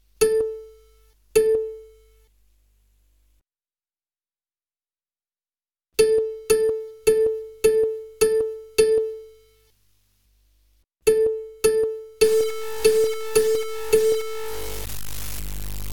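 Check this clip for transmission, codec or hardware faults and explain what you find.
One fault: low bit depth without dither from 12.24 s to the end. Grainy, signal-following distortion with error about 15 dB below the signal fits likely undithered truncation to about 5 bits.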